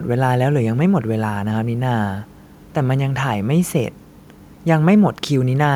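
No technical faults are audible.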